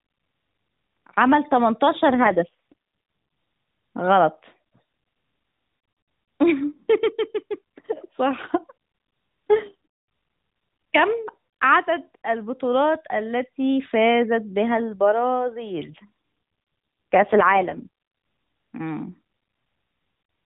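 Speech carried over an AMR narrowband mobile codec, so nothing above 4 kHz comes through. It shows two AMR rate drops, from 2.09 to 2.73 s and from 15.86 to 17.88 s. In both spans the voice turns buzzier and more synthetic, with no gap and no change in bandwidth, before recovering. This fits the network pushing the codec from 12.2 down to 4.75 kbps to spend bits on error protection over a weak radio link.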